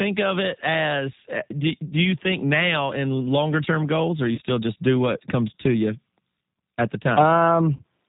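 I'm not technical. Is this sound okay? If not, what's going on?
No. Throughout, the speech sounds muffled, slightly rough and a little robotic, like a cheap phone line. That is the G.729 codec, a phone-call compressor that rebuilds each voice from a rough model of the mouth and throat and discards all the crisp, high-pitched detail.

At 4.35 to 4.40 s, between "term goals or you" and "just do what comes", and again at 7.76 to 7.82 s, the voice briefly gets stretched and smeared. This is VoIP packet loss concealed by the speech codec: about 30 ms of sound went missing each time, which fits one lost packet, and the decoder guessed to fill the gap.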